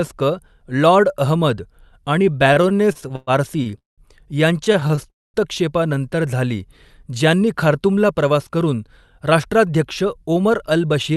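From 2.53 to 4.01 s the speech drags and stutters through 12 short holds, the longest 191 ms. These are repeated stalls (stutter): late packets kept emptying the jitter buffer, so the receiver stretched the last sound until audio arrived. A second, lighter burst of seven brief stalls, none over 20 ms, follows from 4.58 to 5.07 s. At 5.10 s the sound stops for 240 ms, nearly all of it silence, then resumes at 5.37 s. This call audio freeze likely came from packets held up in transit, pushing the delay 240 ms later. From 7.27 to 10.62 s the speech sounds hurried, running about 8% fast at unchanged pitch. This is a jitter buffer speed-up, trimming roughly a third of a second of pitch-period slices to cut the built-up delay. Throughout, the Opus call path limits the audio to about 12 kHz.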